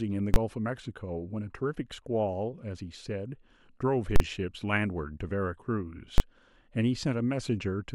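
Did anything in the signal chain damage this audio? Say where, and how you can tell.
Yes. Invalid numbers at full scale in processing: loud bangs at 0.34–0.36, 4.16–4.20 and 6.18–6.20 s, where a calculation produced infinite or invalid values held flat at one extreme, far beyond the speech peaks.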